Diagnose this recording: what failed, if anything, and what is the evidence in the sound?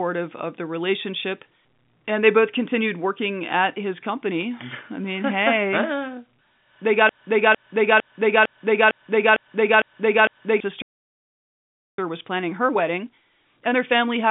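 At 4.41 s there's a short burst of bit errors on the digital phone line: sharp ticks of crackle over otherwise steady speech. On the G.711 link, a stray bit flips a sample's sign or upper bits, and at roughly a tenth of a percent error rate you get just this brief spatter.

From 7.09 s to 10.60 s you get a classic broken-record loop: a 0.45 s chunk of speech plays back to back eight times, identical each pass. The player or stream has likely stalled and keeps resending the last fragment it held, so whatever belonged in that stretch is lost.

Right after, at 10.82 s, the playback stalls and the sound drops out completely for about 1.16 s, picking up again at 11.98 s. That gap mid-flow points to the player likely running dry on data or having its output thread blocked until it recovered.

From 11.98 s to the end, the speech comes through as time-compressed catch-up: it runs about 1.1 times fast but keeps its normal pitch. 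The player is trimming its backlog by cutting small pieces and cross-fading over the joins, all still inside the narrow telephone band.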